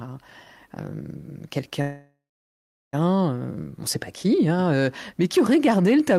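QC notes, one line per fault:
1.81–2.95 s, call audio freeze: the speech stalls for about 1.1 s. The last sound gets stretched into a buzzy tail that fades out and then sits silent for roughly 0.7 s before the speech picks up exactly where it stopped. Nothing is skipped, but everything after this point runs about 1.1 s late. That points to packets held up in transit, likely emptying the jitter buffer so the receiver had to pad the gap.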